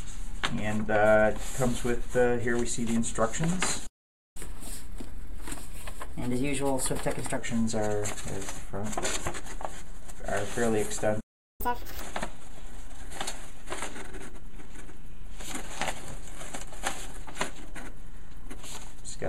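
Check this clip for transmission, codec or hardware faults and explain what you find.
Two delivery faults turn up twice: the audio stops dead and then rushes to catch up.

Playback stalls at 3.86 to 4.37 s (about 0.49 s) and 11.20 to 11.61 s (about 0.39 s): the output drops to silence mid-flow, likely because the player's buffer ran dry or its thread was blocked. The waveform goes flat and the spectrogram shows a blank vertical band before the sound resumes.

Catch-up at higher speed follows each stall, as the player resamples its backlog to recover lost time. From 4.37 to 7.37 s it runs at 1.15× speed, about two semitones sharp. From 11.61 to 12.00 s it runs at 2× speed, close to ten semitones up, a brief chipmunk-like burst. On a spectrogram, harmonics shift upward and events crowd together, then drop back to normal spacing.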